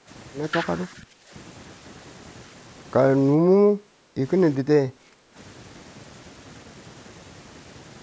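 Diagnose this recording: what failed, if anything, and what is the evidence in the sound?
Speech suppressed in double talk at 0.0–0.09, 0.88–1.33, 3.38–4.19 and 4.63–5.37 s. The speech dips by roughly 10 to 15 dB, likely because the call's echo canceller ducked the near talker.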